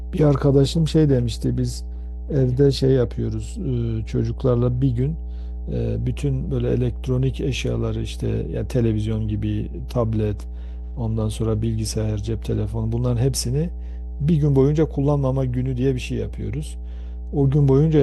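From start to finish, a steady mains hum at 60 Hz sits under the speech, only around 10 dB below it, so it is plainly audible in every pause. Power-line current is leaking into the signal path, most likely through a ground loop or a nearby transformer. The hum is a fixed, pure-pitched tone with some low harmonics, unlike the irregular, shifting rumble of wind or handling noise.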